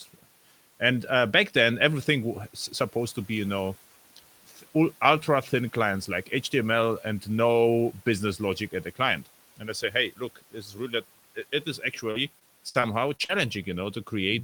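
Just after "logic at the client", from 9.57 to 9.95 s and again from 10.17 to 10.55 s, the noise suppressor cuts speech, mistaking quiet parts for the room noise sitting about 24 dB below. Around a tenth of a second in each stretch is pulled down by about 9 dB, then about 12 dB, so sounds turn faint and swallowed. A spectrogram shows the energy there thinning toward the noise floor.

After "it is", from 12.11 to 13.31 s, repeated packet loss gives a choppy, robotic sound. Short holes, the longest 56 ms, are patched by stretching the preceding sound, covering about a sixth of the span. The waveform shows small repeated, smoothed segments, and the spectrogram shows smeared, static harmonics between the breaks.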